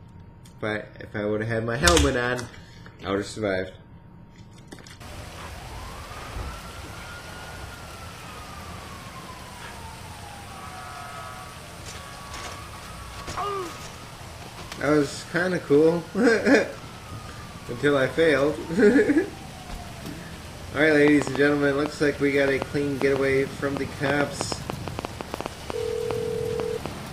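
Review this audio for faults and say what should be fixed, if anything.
A train of clicks runs from 21.08 to 26.87 s: around thirty uneven pops, about 4.5 a second, well above the sound, likely from nearby interference. Keep cables and the interface away from noisy equipment and check the connection before the next take.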